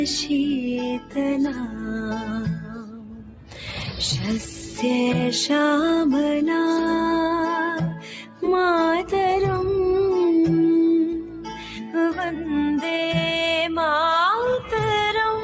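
A noise suppressor built for speech stays active across the whole clip, the noise suppressor applied to music or sounds, treating sustained and ambient parts as noise. Its gain keeps shifting by around 10 dB, so the level pumps and the body thins while onsets pass through more intact. The call microphone processing band-limits the audio at 8 kHz, which is expected.

The same suppressor also cuts specific passages harder: at 0.96 to 1.18 s, 1.49 to 4.0 s, 7.95 to 8.42 s and 11.09 to 12.53 s. In each, the sound cut by the noise suppressor sinks by about 10 dB, and held or decaying parts fade early, leaving audible dips.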